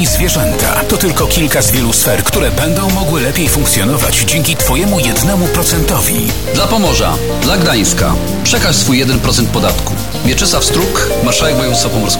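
Throughout, low bit depth without dither, likely truncation to a 4-bit level, leaves error only about 15 dB below the sound, heard as grainy distortion following it.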